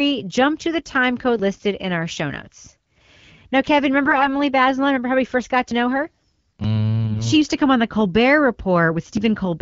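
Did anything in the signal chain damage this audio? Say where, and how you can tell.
Yes. AMR bit errors hit the network stage at 4.05 to 4.29 s and again at 7.06 to 7.20 s, with roughly 5 and 4 percent of bits corrupted. The speech, carried by the AMR-WB codec at 12.65 kbit/s, keeps its pitch and loudness through both stretches but turns hoarse, scratchy and gargly. That points to flipped bits in the weakly protected parts of each frame. The excitation pulses land in the wrong positions, and the fine pitch, gain and spectral parameters drift, while the protected core still decodes.

A dropped buffer shows up at 9.17 s as an abrupt forward jump in the speech and no gap of silence, as if about 70 ms of sound is simply missing. This is likely an overrun at the driver or buffer stage: the capture software failed to read its samples before the hardware overwrote them, so the audio on either side of the lost block is spliced directly together.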